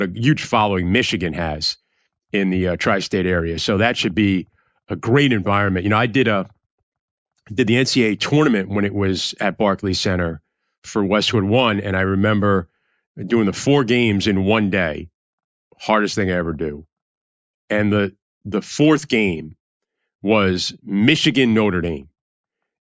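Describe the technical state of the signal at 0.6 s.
At 0.6 s the speech signal is intact, with no audible technical fault at that moment.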